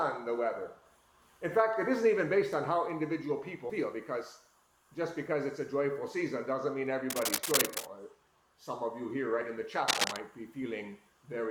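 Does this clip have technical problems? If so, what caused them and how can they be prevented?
Yes. Compressed frames skipped at 3.69 to 3.72 s and again at 9.41 s: the audio jumps forward, by roughly 70 ms the first time and roughly 40 ms the second, which fits losing about four and then two 20 ms frames that were missing or rejected as damaged by the decoder. Prevention: verify file integrity after transfer and use a container or stream with error protection so damaged frames can be recovered or re-sent.

Cable scratch noise from 7.10 to 7.85 s and from 9.87 to 10.16 s: dense, irregular bursts of scratching and rustling sit on the sound at about the same level as the signal itself. This is likely a worn cable, connector or control being moved, so its contact resistance fluctuates rapidly and injects noise. Prevention: replace or clean the suspect cable and connectors, and secure them so they are not disturbed during recording.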